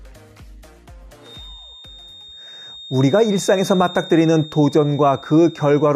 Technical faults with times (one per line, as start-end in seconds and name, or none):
1.19-5.96 feedback whistle